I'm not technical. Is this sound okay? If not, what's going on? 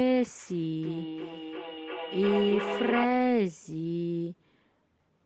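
No. From 0.83 to 3.1 seconds there's feedback echo between two devices: another device in the room replays the speech into this mic, so it keeps coming back about every 0.4 seconds.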